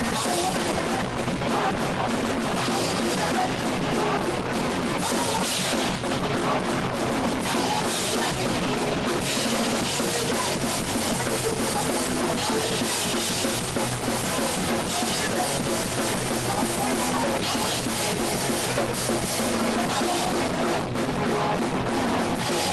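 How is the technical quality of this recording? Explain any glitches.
No glitches turn up anywhere in the recording; the signal stays continuous and steady throughout, and its slightly band-limited, coded character is just what a normally working WebRTC call path with the Opus codec leaves on the sound.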